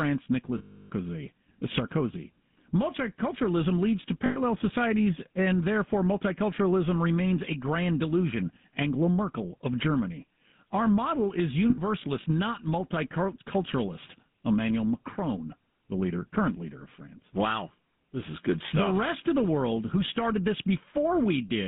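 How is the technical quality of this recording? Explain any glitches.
The recording has clear technical faults: GSM full-rate coding throughout and three short dropouts.

GSM full-rate codec: The whole clip has a buzzy, gravelly roughness, and the band runs only from about 150 Hz to 3.7 kHz. The codec rebuilds the voice from a vocal-tract model driven by coarse pulses, which fits a 13 kbps phone link.

Lost GSM frames: Dropouts occur at 0.58 to 0.90 s, 4.26 to 4.41 s, and 11.70 to 11.79 s. The decoder repeats the last good frame. Each gap becomes a rough, metallic ring. The first lasts about 0.32 s.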